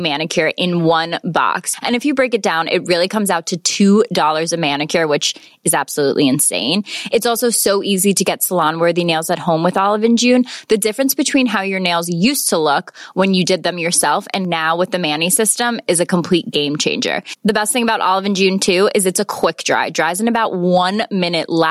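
Gain pumping runs through the whole speech clip, with the gain swinging by around 15 dB. The likely cause is input gain set far too high, with a fast limiter repeatedly pulling it back, squashing the level.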